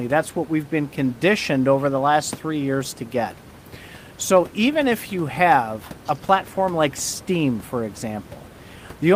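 No technical faults can be heard anywhere in this speech clip. The only background is the room noise picked up by the microphone, sitting about 24 dB below the speech.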